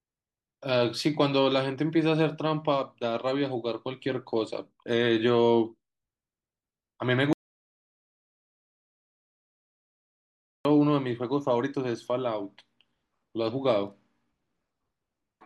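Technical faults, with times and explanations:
7.33–10.65 s: audio dropout to silence. Speech cuts mid-flow into 3.3 s of dead digital silence with no room tone, unlike a natural pause, likely from lost input.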